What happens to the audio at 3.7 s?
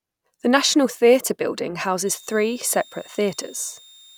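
At 3.7 s a switching supply whistle is running, from 2.07 s, right after "national theatre building", to the end: a power supply in audible burst mode or beating with another one, heard as a thin high whistle near 3.7 kHz, about 30 dB under the speech.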